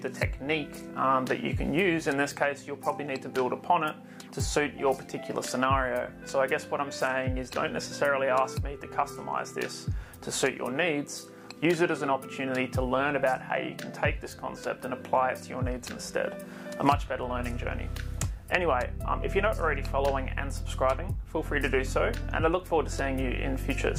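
No technical faults can be heard anywhere in this recording.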